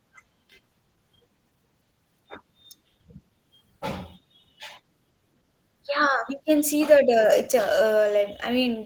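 Throughout the speech, Opus voice compression is running short of bits: the encoder splits the band, coding everything below 8 kHz with its linear-prediction layer and the top with a coarse transform layer, and the damage is plainly audible, which fits a bitrate around 16 kbps with 20 ms frames. The excitation is quantised roughly, so the speech comes out hoarse and faintly robotic.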